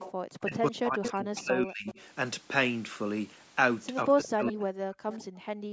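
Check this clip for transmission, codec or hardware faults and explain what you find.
The clip has three kinds of echo-canceller fault from a speakerphone-style call, all on speech band-limited to 8 kHz.

Echo leak occurs at 0.0–0.12, 1.05–1.11, 1.87–2.01 and 5.12–5.24 s. A faint copy of the voice trails 142 ms behind, between roughly 10 and 20 dB below the speech. This is likely residual loudspeaker pickup that the canceller did not fully remove. A spectrogram shows ghost harmonics offset by that delay.

Background gated by the echo canceller appears at 0.12 s as a brief dip of about 14 dB lasting about 40 ms, and again from 5.27 s to the end, where the room sound drops by about 40 dB for about half a second. The canceller clamped the microphone while the loudspeaker was playing. The waveform's noise floor sinks abruptly, and the spectrogram goes nearly blank.

Speech suppressed in double talk occurs from 0.44 to 1.88 s and from 4.05 to 4.99 s. 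The voice dips and breaks into pieces, at times by about 40 dB, likely because the canceller mistook both talkers for echo. The waveform shows chopped, uneven envelopes, and the spectrogram shows missing high-frequency energy and gaps.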